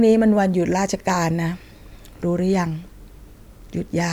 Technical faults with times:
0.37-4.00 clock drift buffer slips

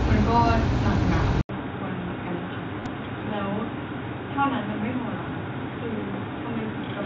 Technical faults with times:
1.41-7.05 input switched to a poorer device
2.80-2.86 concealed Bluetooth headset packet loss

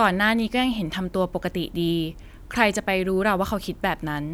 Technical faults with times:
none

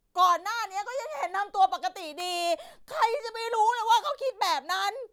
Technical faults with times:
2.20 electrical switching spike

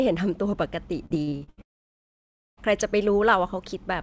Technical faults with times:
1.06-1.59 repeated packet loss (robotic sound)
1.61-2.59 long network dropout

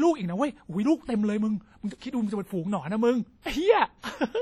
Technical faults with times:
0.00-4.42 WMA compression
1.05-1.09 pre-echo
1.99-2.01 pre-echo
3.42-3.46 pre-echo

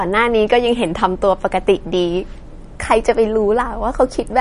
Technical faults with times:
0.00-4.40 MP3 compression

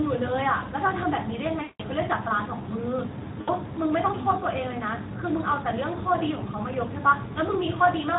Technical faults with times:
0.00-8.18 Speex codec
1.61-1.82 VoIP packet loss concealed by the speech codec
3.41-3.55 VoIP packet loss concealed by the speech codec

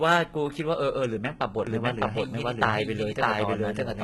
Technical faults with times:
0.00-4.04 HE-AAC compression
1.67-4.04 doubled audio track

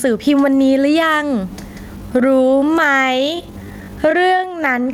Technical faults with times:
0.00-4.94 gain pumping
1.94-4.94 time-stretched section

